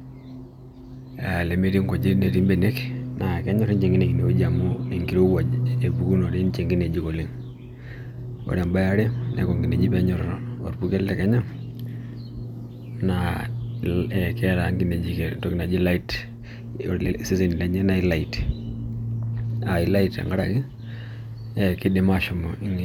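Nothing in this speech recording stands out as a technical fault at any point, so there's nothing to flag here.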